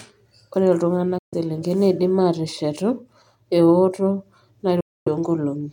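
Bluetooth dropouts cut the speech to silence from 1.18 to 1.35 s and again from 4.80 to 5.08 s. Packets likely failed to reach the headphones in time and were discarded. After each gap the speech resumes further along, as though it had kept playing.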